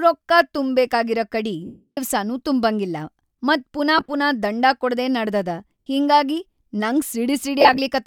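At 1.66 s the speech falls into lost LE Audio frames for 315 ms, right before "ತುಂಬಂಗಿಲ್ಲಾ ಮತ್ ಪುನಾ ಪುನಾ". The decoder keeps replaying the last spectrum with random signs, so it smears into noise and fades toward silence. Shorter, scattered drops at 3.98 s and at 7.60 s (after "ಕೊಡದೇ ನಡದದ ಹಿಂಗಾಗಿ ನಂಗ್") give brief hissy blurs. So does a 67.5 ms gap at 5.83 s, between "ಪುನಾ ದಂಡಾ ಕೊಡದೇ ನಡದದ" and "ಹಿಂಗಾಗಿ ನಂಗ್".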